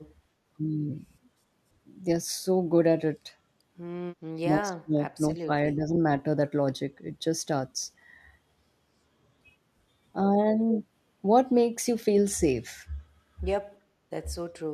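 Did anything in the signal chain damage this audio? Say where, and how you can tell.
Yes. Call processing most likely suppressed speech in double talk: the echo canceller, unable to separate the talker from loudspeaker echo, ducked both. The speech dips from 4.37 to 5.0 s, 5.16 to 5.51 s and 5.75 to 5.9 s, and again from 14.53 to 14.62 s, falling by as much as about 30 dB.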